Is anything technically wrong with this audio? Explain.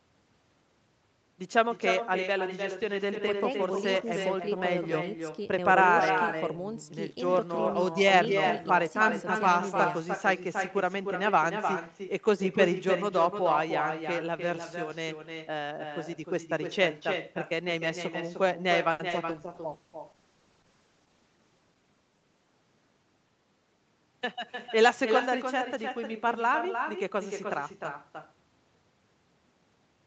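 Yes. The speech has echo all the way through, and a burst of network faults clusters between about 18.9 and 25.3 s.

Echo with no canceller runs the whole clip. Every phrase is shadowed roughly a third of a second later by a copy about 7 dB down. It sounds thinner and roomier than the direct sound. The far end is replaying the call through a loudspeaker into its microphone, and nothing subtracts it. Room reverberation would smear continuously from the first instant. This echo is a distinct, delayed repeat, long enough to sound like a second voice trailing behind.

A short stall from a late packet occurs from 18.91 to 19.01 s. A packet arrived late, the jitter buffer ran dry, and the receiver stretched the last sound for 80 ms before resuming exactly where it left off. The result is a held, faintly buzzy sustain with nothing skipped. That separates it from true packet loss, where audio is actually gone. 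The stall also pushes playback about 80 ms later.

A short concealed packet loss follows at 19.09 to 19.12 s. Here 20 ms of audio never arrived, and the decoder papered over the gap by extrapolating the preceding sound for 10 ms before blending back. It is a brief smear or wobble where a tiny slice is genuinely missing. Unlike the stall before it, more is lost than is filled. The sound jumps slightly forward instead.

A call bitrate drop lasts from 19.29 to 25.30 s. The bandwidth estimate collapsed, and Opus was pushed from 40 down to 10 kbps, staying at the floor for about 1.25 s. The speech turns rough and watery, and the top end dulls, since the normal call path stops at 8 kHz and the low rate narrows it further. Packet loss causes brief breaks. This degradation is continuous over several seconds and then recovers.

A jitter buffer speed-up runs from 21.00 to 21.43 s, inside the low-bitrate stretch. 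After the earlier delay, the buffer held too much audio. The receiver trimmed it by cutting out many short pitch-period slices, around 70 ms in total, which plays the speech at about 113% speed. The talking sounds briefly hurried while the pitch stays the same. A playback-rate change would shift the pitch as well.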